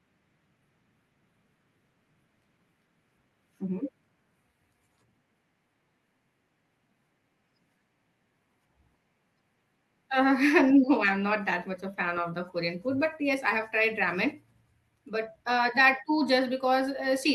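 No technical faults can be heard anywhere in this speech recording; the signal stays continuous and intact throughout.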